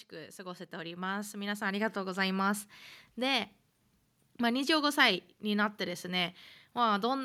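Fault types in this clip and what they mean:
Automatic gain rising: the gain control judged the input too quiet and turned itself up, so from 0.1 to 2.39 s the speech and the background noise swell together by about 11 dB. Unlike a sudden level jump, the climb is smooth and slow, and unlike compressor pumping it does not dip back down between phrases.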